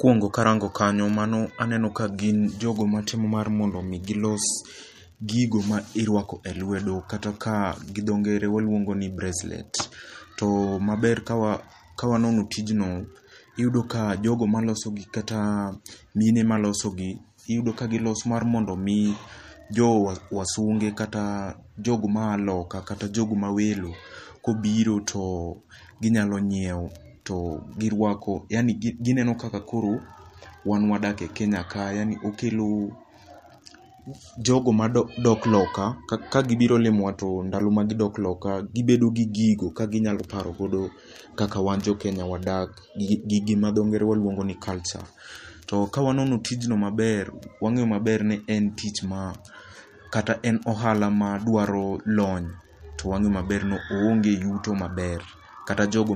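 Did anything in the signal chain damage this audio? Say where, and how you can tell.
Yes, at the codec stage: the speech sounds like it went through MP3 compression at a low bitrate, likely around 48 kbps. Throughout the clip nothing reaches above 14.6 kHz, a hard ceiling where the encoder dropped the treble to save bits. Below that, weak frequency lines are zeroed in some frames and restored in others, so the sound turns watery and swirly, s sounds pick up a metallic chirp, and sharp onsets are smeared.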